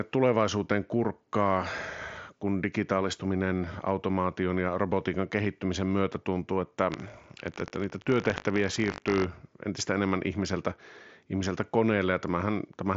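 Buffer tearing runs from 6.9 to 9.25 s in this speech clip, starting after "kehittymisen myötä tuntuu että" and clearing before "entistä enemmän ihmiseltä ihmiseltä". Writer and reader pointers cross each period, splicing in a small slice of audio about 70 ms old, producing a 50 Hz robotic buzz that fits a 20 ms buffer. The Bluetooth mSBC headset codec path caps the band near 7.7 kHz with light graininess.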